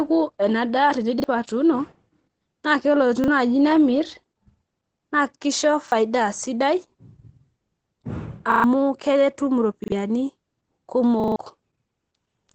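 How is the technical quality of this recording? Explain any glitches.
The recording has two problems: steady Opus voice compression across the whole clip, and six repeated-buffer stutters.

The Opus voice compression runs from start to end. Nothing reaches above about 8.9 kHz. The speech sounds muffled and hoarse, with a faint robotic edge. The damage is plainly audible. The coder models the voice with linear prediction and codes the excitation coarsely. That fits a low bitrate of around 12 kbps in SILK mode, working in wideband.

The repeated buffer appears six times. Each is a hard-edged stutter. At 1.2, 3.24 and 5.88 s, a 40 ms piece plays twice. At 8.52 to 8.64 s it plays four times. At 9.84 to 9.92 s it plays three times. At 11.2 to 11.36 s it plays five times. Fresh audio arrived late, so the device replayed the last 40 ms buffer. The later stutters are longer and drop more real audio, up to about 150 ms.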